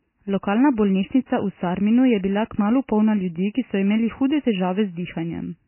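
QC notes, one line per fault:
Throughout, MP3 compression: nothing above 3 kHz and heavily watery, swirling speech; spectrogram shows a flat ceiling with flickering holes, likely from a bitrate around 16 kbps.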